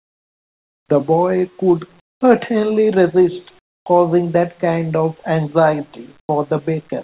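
From 0.0 to 0.89 s, 2.0 to 2.21 s, 3.59 to 3.86 s and 6.2 to 6.29 s, pauses in the speech carry comfort noise in place of the background. The hiss is steady and featureless. It sits about 27, 23 and 12 dB down in the first three gaps and about 10 dB up in the last. Discontinuous transmission likely halted sending, and the receiver synthesised filler. The call path passes nothing above 4 kHz.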